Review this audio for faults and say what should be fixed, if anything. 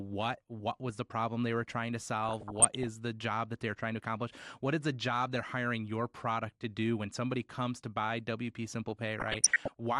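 MP2 compression is audible throughout the speech: the top end is dull, with a gurgling, granular texture. Layer II divides the signal into 32 equal sub-bands and shares out a limited bit budget. Here the upper bands drop in and out and the remaining ones are coarsely quantised, which points to a low rate around 80 kbps as the likely cause. Encoding at a higher bitrate, or with a more efficient codec, would prevent this.

DAB burbling occurs from 2.29 to 2.87 s and again from 9.20 to 9.80 s. Bit errors, roughly half a percent in the first burst and somewhat higher in the second, got past error correction into the MP2 data. The corrupted samples put short blips of noise into single sub-bands, and corrupted scale factors, where they get through, make sub-bands jump in level for up to a frame. Better reception, or a stronger error-protection level, would prevent it.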